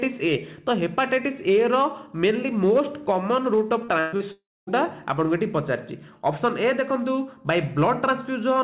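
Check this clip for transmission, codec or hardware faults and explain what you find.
Yes, there are faults: four packet-loss events packed between 3.84 and 4.70 s, all within a call path whose band stops at 4 kHz, which fits G.711 A-law at 64 kbps.

Short concealed packet loss occurs at 3.84–3.91 s and 4.16–4.23 s, each losing about 40 ms. The receiver extended the preceding sound to bridge each hole, producing a brief smear. On a spectrogram, harmonics or noise stretch unnaturally flat; the waveform shows a short repeated cycle.

A burst of packet loss runs from 4.00 to 4.15 s, with 120 ms missing. The decoder kept continuing the last sound while lowering its level, so it is heard as a held buzz or hiss that fades. The spectrogram shows a smooth, decaying band, and the waveform tapers before real audio resumes.

A long network dropout follows at 4.32–4.70 s. About 360 ms of audio never arrives. 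A fading continuation of the last sound gives way to roughly 240 ms of silence, likely because the network delivered nothing for that stretch. The spectrogram goes blank and the waveform flattens to near silence before the sound returns further along.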